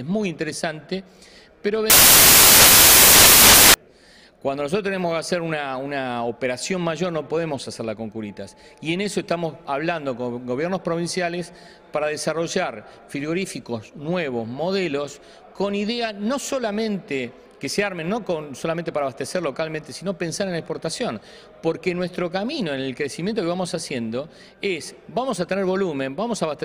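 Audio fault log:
1.90 to 3.74 s, samples built from the wrong bytes: for about 1.8 s the sound gives way to broadband noise. The reader has combined each sample's bytes incorrectly, through a one-byte offset, a swapped byte order or a wrong alignment assumption. The quickly fluctuating low-order bits therefore land in the most significant position of every value. The waveform loses its real shape and turns into near-random values, heard as noise.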